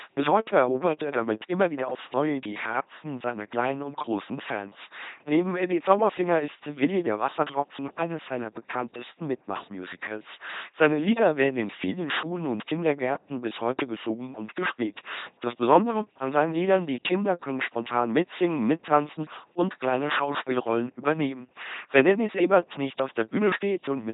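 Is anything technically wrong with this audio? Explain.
Yes. Throughout the speech the LPC-10 vocoder has heavily damaged the audio. The voice is rebuilt from a short all-pole filter driven by either a pulse train or noise, with each instant forced to be fully voiced or fully unvoiced. The result is a buzzy, mechanical, robotic voice, with buzzing or hiss where the voicing choice is wrong. Nothing is present above 3.8 kHz, and the coarse quality fits a very low bitrate of about 2.4 kbit/s.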